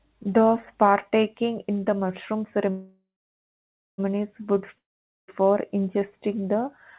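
At 2.7 to 4.0 s, after "partaking in the mushroom", delayed packets likely drained the jitter buffer. This call audio freeze stretches the last sound into a fading buzz, then about 0.93 s of silence, before the speech resumes exactly where it stopped.

At 4.78 to 5.30 s, just before "ingesting the", packets that likely never arrived cause a long network dropout. A brief buzz fades into about 0.47 s of silence, and the speech returns with roughly half a second gone.

Both events pass through a G.711 A-law call path at 64 kbps, which leaves nothing above 4 kHz.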